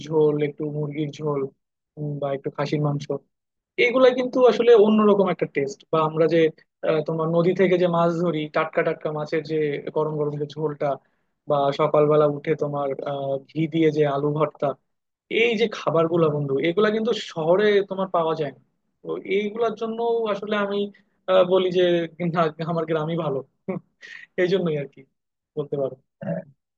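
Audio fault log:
No faults detected in playback.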